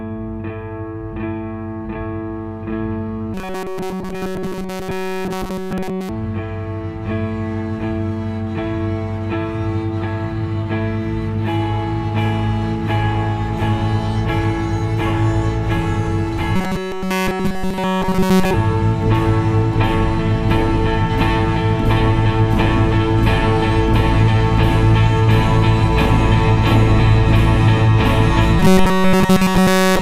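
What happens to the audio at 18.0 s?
At 18.0 s the sound has turned into a robotic buzz from repeated short buffers, running from 16.56 to 18.54 s. New audio likely arrives too seldom, so one fragment of about 5.3 ms repeats almost continuously. That forces a rigid, metallic 188 Hz tone.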